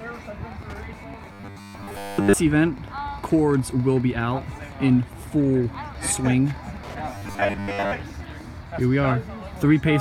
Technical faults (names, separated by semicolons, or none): Wi-Fi interference; robotic sound from repeated short buffers